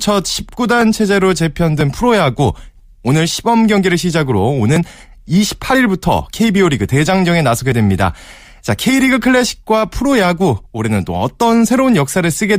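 Overlap between stream segments trims 5 to 15 milliseconds at 0.81, 1.81, 2.79, 3.78, 4.76, 5.75 and 7.72 s, about once per second. Each cut leaves a waveform jump that is heard as a tiny skip and shows as a thin vertical spectrogram stripe.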